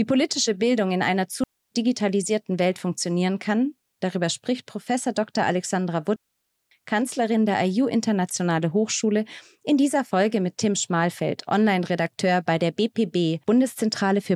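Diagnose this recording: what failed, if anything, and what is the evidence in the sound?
The failure is in the wireless link: two digital wireless dropouts. The speech cuts to near silence from 1.44 to 1.71 s, about 0.28 s. It cuts again from 6.16 to 6.71 s, about 0.55 s. Each hole is clean. There is no crackle or noise burst at either edge. That points to the receiver losing too much data and muting itself with a very fast fade, rather than to a wiring or converter fault.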